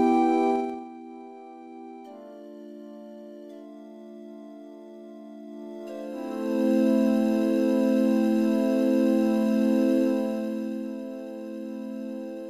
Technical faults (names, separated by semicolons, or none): zipper noise